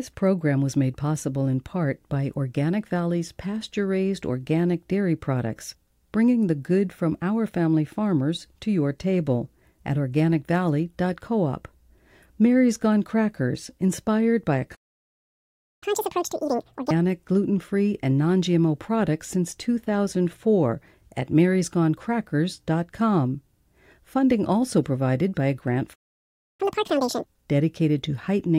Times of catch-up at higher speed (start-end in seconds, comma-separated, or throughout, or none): 15.83-16.91, 26.61-27.26